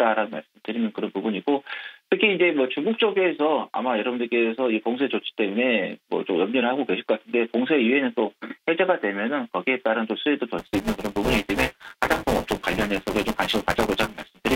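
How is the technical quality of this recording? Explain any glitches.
Buffer tearing affects the recording from 10.58 s to the end. The writer and the hardware reader of the ring buffer have slipped, so roughly a fifth of each 5 ms period replays audio about 10 ms old. This gives a robotic 200 Hz buzz, seen as evenly spaced vertical striations and hard waveform discontinuities.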